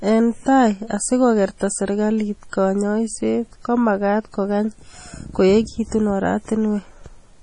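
A short speech clip with heavy MP3 compression running the whole way through. Nothing comes through above about 10.5 kHz, so the top end is sliced off flat, and the quieter detail has that watery, swirly quality as weak frequency content flickers in and out between frames. Attacks smear too. That's likely a starved encoder, and the damage fits a low bitrate of around 32 kbps.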